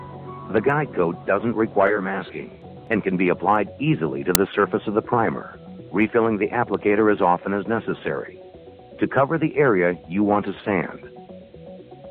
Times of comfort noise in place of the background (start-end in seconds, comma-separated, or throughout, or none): none